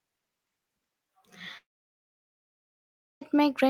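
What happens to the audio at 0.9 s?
Nothing goes wrong at 0.9 s; the speech there plays through intact, with no dropout, click or distortion.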